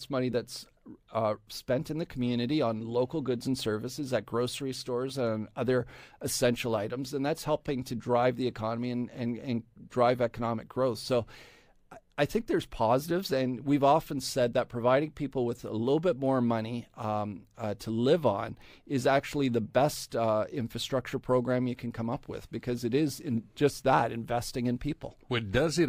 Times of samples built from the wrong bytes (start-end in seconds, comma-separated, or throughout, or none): none